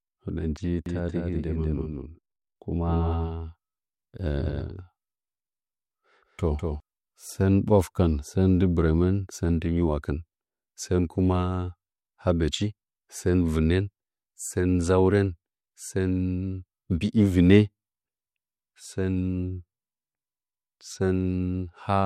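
From 0.86 to 6.80 s the speech carries a doubled audio track: a second, full-band copy trails about 200 ms behind, roughly 5 dB quieter, likely from a slower capture path. Unlike an echo, it has no decay or room colour, and it starts abruptly just before "sɚn ɓwakɨfɚn sɚn ndɨ".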